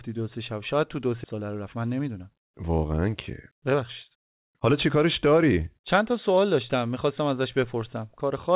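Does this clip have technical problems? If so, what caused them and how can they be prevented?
Yes. At 1.24 to 1.26 s there is a skip ahead: roughly a second of speech is missing, and the two sides are joined with no fill. Audio already queued was dropped, in transit or by an overflowing jitter buffer. Prevention: size the jitter buffer for realistic bursts and conceal losses rather than discard.

Jitter buffer speed-up follows from 1.34 to 3.08 s at 113% speed and from 3.53 to 6.90 s at 111%. The receiver cut short pitch-period pieces to drain excess delay, about 0.2 s and 0.4 s, so the speech sounds hurried at unchanged pitch. Prevention: stabilise packet delivery and allow gentler, slower delay reduction.

The G.711 mu-law call path leaves nothing above 4 kHz.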